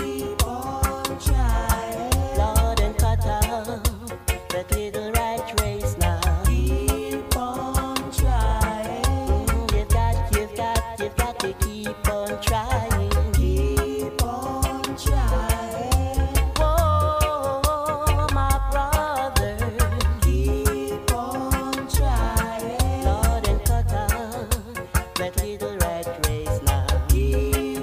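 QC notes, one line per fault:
No faults found on this pass.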